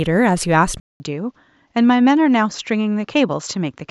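At 0.8 s the speech drops out for about 200 ms, then returns duller and a few decibels quieter, with a faint new noise floor far beneath it, and stays that way to the end. This points to the input likely switched to a poorer device mid-recording. On a spectrogram, a brief blank column marks the switch, after which energy stops sharply at 7.6 kHz. The waveform shows the gap and a smaller envelope afterward.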